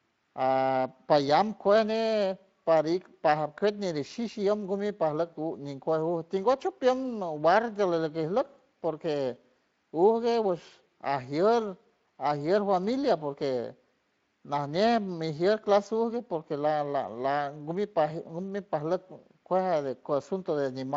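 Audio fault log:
No faults found in this speech clip; the Speex-coded path shows nothing to log.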